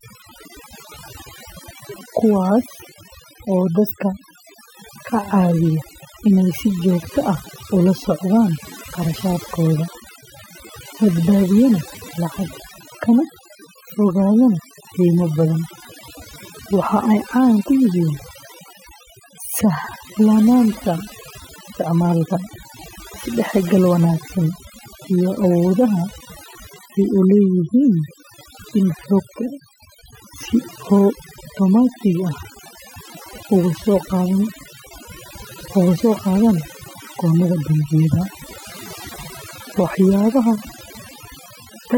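From start to finish the gaps between phrases fall to near silence flecked with twinkling specks. That is overdone noise removal: a reducer set far too hard cuts individual frequency bands near its noise estimate, taking quiet speech detail with them.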